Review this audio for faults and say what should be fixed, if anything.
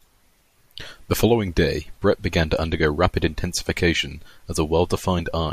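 Nothing here needs fixing; no faults were heard.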